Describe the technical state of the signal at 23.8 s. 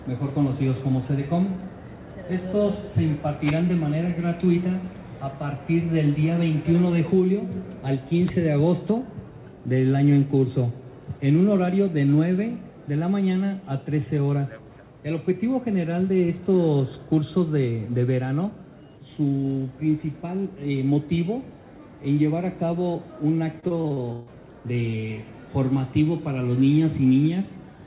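At 23.8 s the signal sits inside a burst of repeated packet loss (robotic sound) running from 23.60 to 24.29 s. Six gaps fall in under 0.7 s. Each is filled by stretching the last received audio, so about a third of the span is concealment. The longest hole lasts 141 ms. The result is choppy, with pieces dropping out. Everything is band-limited below 4 kHz, which fits a G.711 call path.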